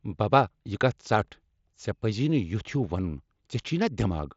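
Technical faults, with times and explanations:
No faults found; the speech passes over a Bluetooth mSBC headset codec link, with nothing above about 7.7 kHz.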